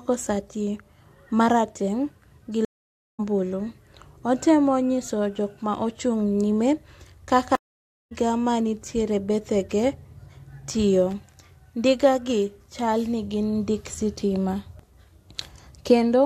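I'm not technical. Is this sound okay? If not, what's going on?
No, there are two kinds of problem in this speech recording.

The first is a stream reconnect, and it happens twice. At 2.65 s the audio drops out for about half a second, and when it comes back it has skipped ahead by roughly half a second. It happens again at 7.55 s, right after "nyime kaka": about 0.56 s of silence, then it picks up at "manitiere bethege", having jumped forward a bit under half a second. In both cases the connection broke, the player restarted, and it carried on from wherever the stream had reached by then.

The second is loose connector crackle, from 11.11 to 11.36 s. That short burst of scratchy crackling is what you hear when a worn or dirty plug or socket keeps losing and regaining contact. It chops the sound into rough fragments for about a quarter of a second.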